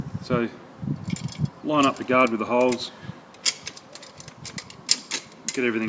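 Nothing stood out as a technical problem on listening to this audio.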